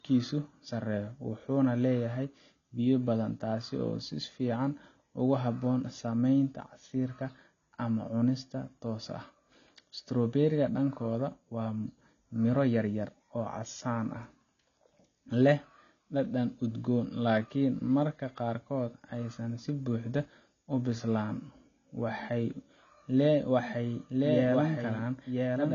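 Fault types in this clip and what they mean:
AAC compression: The speech sounds dull and smeared throughout, with nothing above about 6.9 kHz and a watery, fizzy texture on sibilants and held sounds; the damage is plainly audible. This is likely low-bitrate AAC-LC coding, which fits a rate around 24 kbps: the encoder lowers its cut-off and quantises the remaining frequency lines so coarsely that parts of the spectrum drop out or are replaced by substitute noise.
Doubled audio track: From 23.59 s to the end, a second copy of the speech runs about a second behind the original and a few decibels quieter, so each phrase is heard again over what follows. The copy enters abruptly and has no reverberant tail or room colour, unlike a real echo. This is likely the same signal mixed in twice, captured again through a slower path or left out of step by an edit.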